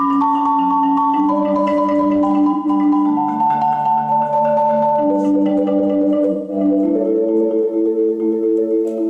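A brief smeared, noisy patch at 2.52 to 2.69 s, and a longer one from 6.32 to 6.56 s, are AAC frame loss with concealment: the decoder rebuilt roughly 128 ms and 171 ms of missing audio, consistent with three and four lost frames, from the last good spectrum.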